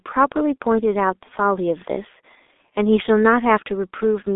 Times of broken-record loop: none

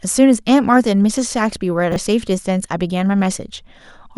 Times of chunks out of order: 1.92-1.96

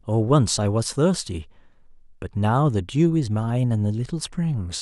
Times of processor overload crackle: none

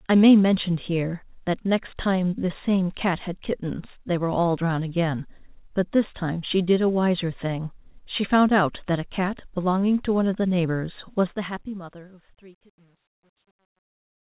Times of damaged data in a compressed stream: none

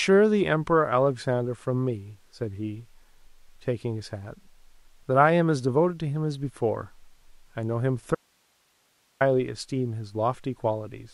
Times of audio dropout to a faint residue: 8.15-9.21

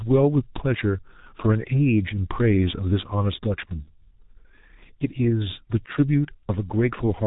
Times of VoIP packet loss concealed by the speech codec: 3.83-3.89

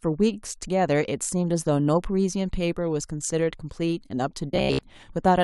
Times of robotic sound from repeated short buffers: 4.52-4.83

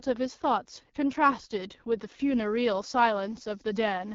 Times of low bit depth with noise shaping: 2.06-4.15

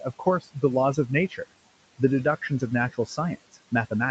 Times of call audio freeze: none

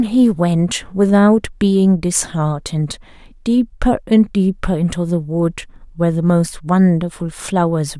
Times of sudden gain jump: none

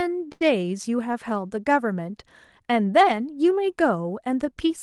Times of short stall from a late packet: 0.32-0.42

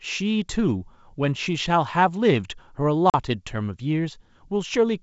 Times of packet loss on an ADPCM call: 3.10-3.15

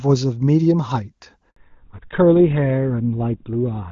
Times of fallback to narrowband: 1.56-3.92

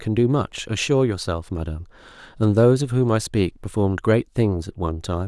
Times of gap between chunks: none

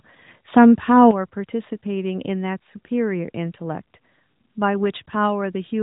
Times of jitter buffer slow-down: none

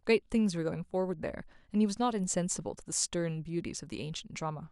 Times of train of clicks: none

